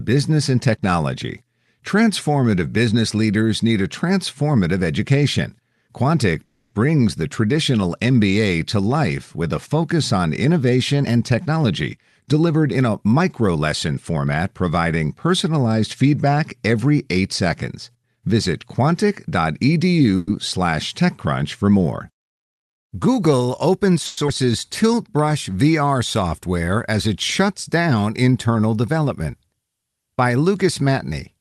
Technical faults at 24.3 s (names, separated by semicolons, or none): skip ahead